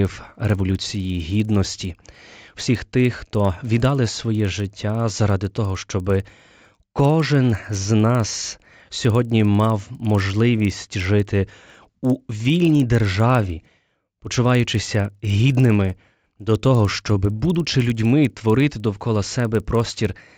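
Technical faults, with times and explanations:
Throughout, resampler restarted on every block: the 16 kHz to 48 kHz conversion was run separately on each 50 ms block, leaving a small error at every block edge, so the speech carries a steady 20 Hz ticking buzz that sounds only while signal is present.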